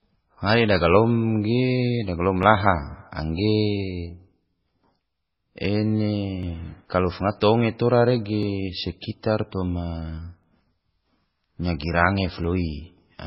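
Speech, likely squeezed through heavy MP3 compression at a very low bitrate, around 16 kbps, leaves nothing above 5.6 kHz, so the voice sounds dull, watery and swirly, with smeared consonants. Periodic USB or driver dropouts, where something blocks the audio path every 2.0 s from 2.43 s to 12.44 s, skip a couple of milliseconds each time, producing regular ticks.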